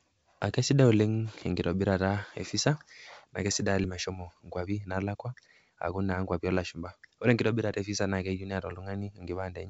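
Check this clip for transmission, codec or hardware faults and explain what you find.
Two network faults in this speech clip, heard through a G.722-style path with nothing above 8 kHz.

At 3.84 s there's a skip ahead: about a second of speech gets dropped and playback jumps straight on, so the two sides butt together with no gap.

From 4.09 to 6.49 s comes a jitter buffer speed-up. The buffer trims tiny pitch-period slices to shed about a third of a second of backlog, so the speech runs roughly 12% fast and sounds hurried at normal pitch.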